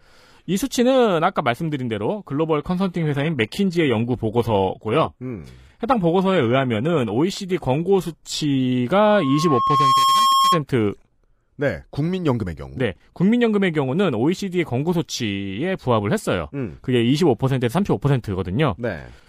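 A speech recording with two separate faults. From 2.60 s to 8.60 s the sound switches abruptly to a duller, more synthetic quality with no gap at either edge. This is an adaptive stream at a lower bitrate: the player dropped to a cheaper version of the stream while the connection was slow. The sound points to a move from roughly 96 kbit/s AAC-LC to about 20 kbit/s HE-AAC. On a spectrogram that stretch shows a hard ceiling at 14.9 kHz, with a smeared, patchy texture below it and sharp vertical edges where it starts and stops. Soon after, from 8.94 s to 10.63 s, comes a loudspeaker feedback squeal. A microphone picked up its own loudspeaker, and the loop gain went above one at 1.1 kHz, so that tone fed itself and swelled over about a second to roughly 5 dB above the speech. A spectrogram would show a single bright horizontal line at 1.1 kHz that thickens as it grows. In the waveform the envelope rises steadily.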